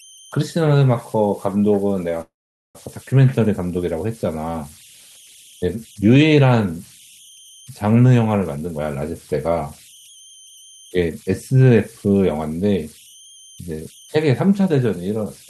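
Converter idle tones run through the whole speech clip as a whistle near 3 kHz and a grainy layer at about 27 dB below the speech. Unlike steady interference, it comes from an undithered delta-sigma converter locking into repeating bit patterns on small input.

A call audio freeze runs from 2.21 to 2.77 s. The last sound is stretched into a fading buzz or hiss, then about 450 ms of silence. Speech resumes where it stopped, about 534 ms late but with nothing lost, which sets it apart from a dropout. The likely cause is delayed packets draining the jitter buffer.

Jitter buffer speed-up follows at 8.56 to 8.80 s, running at 156% with about 150 ms cut, and again at 10.78 to 11.88 s at 108% with roughly 100 ms removed. Pitch-period trimming makes speech hurry without rising in pitch, unlike resampling.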